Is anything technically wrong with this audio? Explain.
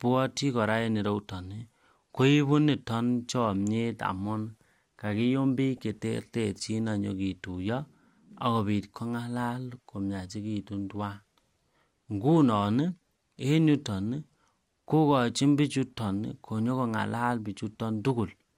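Yes, there's a short burst of DAB burbling on the speech from 5.77 to 5.81 s. Weak reception let bit errors, roughly a tenth of a percent, slip past error correction and corrupt a few MP2 frames, so wrong samples put short blips of noise into single sub-bands, giving a quick burst of noisy blips.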